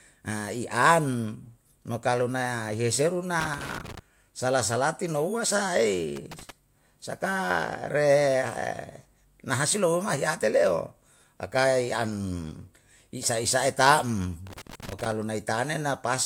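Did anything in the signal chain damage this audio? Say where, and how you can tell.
Yes: loose connector crackle at 3.40 to 3.99 s, 6.16 to 6.50 s and 14.47 to 15.12 s, damage in the analogue wiring stage. The first burst lands between "an mo kalu yeseru" and "sala salati nouwe sa", the second just after "sala salati nouwe sa". Each is an irregular spell of scratchy crackle lasting about a third to two thirds of a second. A worn or dirty contact is making and breaking as it shifts, chopping the signal, with pops from any DC on the line.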